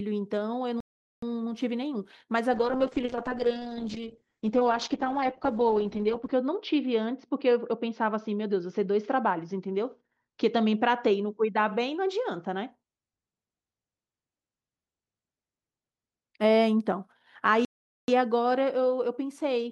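The speech cuts to silence at 0.80 s for 0.42 s, then resumes. This is a playback stall, likely the player starving for data or its thread being blocked. From 2.55 s to 12.77 s the speech turns rough, watery and muffled, with high frequencies cut from 20 kHz down to 8 kHz. This call bitrate drop fits the encoder falling from 48 to 8 kbps, staying at the lowest rate for 3.8 s. At 17.65 s a second stall silences the speech for 0.43 s before it carries on.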